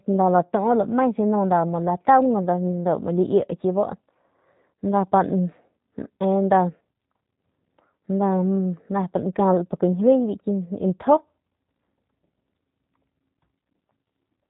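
G.729 coding runs throughout the speech, and the sound fits the G.729A variant at 8 kbit/s. Each 10 ms frame is rebuilt from a vocal tract filter, a pitch predictor and a few pulses, leaving plainly audible roughness and a synthetic edge, with nothing above 3.8 kHz.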